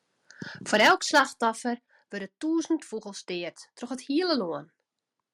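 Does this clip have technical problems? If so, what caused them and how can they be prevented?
Yes. From 0.74 to 1.21 s there's microphone overload. The loudest peaks run about 9 dB past full scale, so a few percent of the waveform has its tops sheared flat, and you hear a harsh, crackly edge on those syllables. The likely cause is the input volume being set too hot, so the converter simply runs out of headroom. To avoid it, start with the mic gain lower so peaks sit well below the ceiling.

There are also two places where the microphone volume is stepped down. At 0.87 s, right in the middle of that distorted stretch, the whole level, voice and room alike, drops by about 4 dB in one go. At 1.86 s it drops again by about 6 dB. That sudden step in both voice and background points to the call software likely reacting to the clipping and cutting the device's input gain. If the level is set sensibly from the start, or automatic gain control is switched off, it won't have to do that.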